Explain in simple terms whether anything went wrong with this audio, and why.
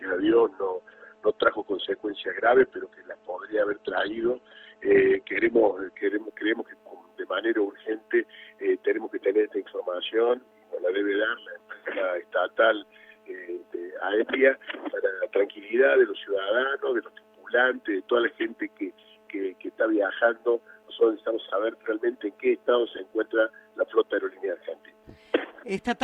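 For the first 6 seconds, the adaptive stream was starting at a low bitrate: dull and smeared, with nothing above 8.2 kHz, then it sharpens abruptly without any pause, unlike a dropout.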